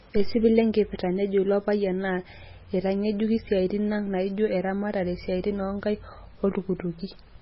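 Throughout the speech, the audio was likely squeezed through heavy MP3 compression, at a level that fits a very low bitrate near 16 kbps. The encoder cut everything above 5.6 kHz and dropped weak detail, leaving the sound dull, watery and swirling, with smeared consonant onsets.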